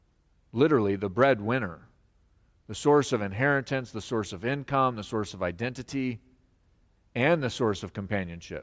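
No technical faults are audible.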